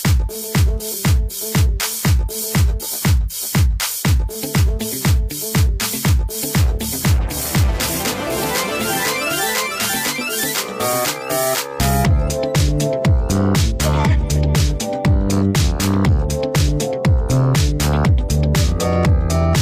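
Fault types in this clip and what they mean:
Nothing stood out on listening to this clip.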